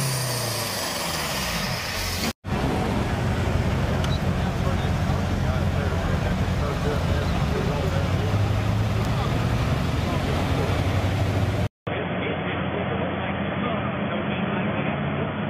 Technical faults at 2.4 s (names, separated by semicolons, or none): none